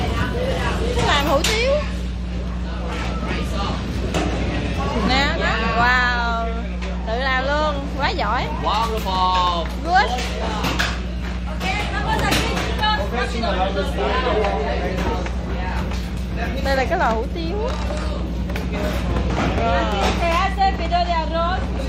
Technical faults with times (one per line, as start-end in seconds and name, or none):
0.00-21.88 mains hum